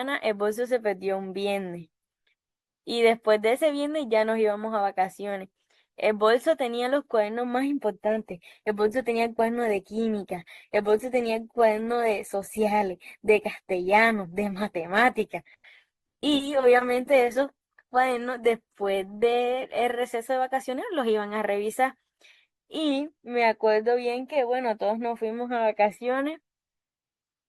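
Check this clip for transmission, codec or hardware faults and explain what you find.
One transmission fault is present: the stream switched down to a lower-quality version partway through. Adaptive stream at a lower bitrate, from 8.04 to 20.04 s: the player dropped to a cheaper encoding for 12 seconds as the connection slowed. This is consistent with Opus falling from about 64 to about 16 kbit/s. The speech takes on more codec smearing. The change is abrupt both ways, with no gap.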